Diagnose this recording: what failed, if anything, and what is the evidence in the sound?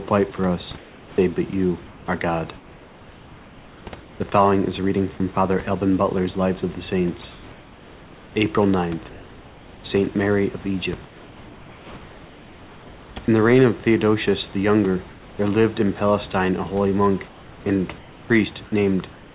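Call processing. Comfort noise in place of the background at 0.78–1.18, 1.86–4.2, 7.32–8.36, 11.06–13.28, 15.1–15.38 and 17.28–18.3 s. Steady, featureless hiss, about 2 to 3 dB quieter in the first, third and fifth. Likely discontinuous transmission.

Sound dropped by the voice detector at 5.18–5.20 s and 13.26–13.28 s, just before "the reign of". Brief noise fills. Likely the detector took sound for background and stopped sending.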